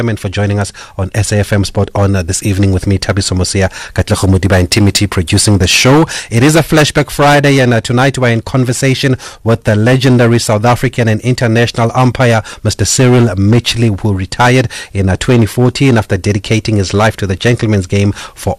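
Hard clipping runs through the whole speech recording. The signal was driven about 13 dB past what some stage in the chain could pass, so every peak above that ceiling was sliced flat, roughly 7 percent of the samples. Those flattened tops generate added harmonics reaching far up the spectrum, heard as a gritty distortion that rides on the louder stretches of speech and adds a rough edge to their high end.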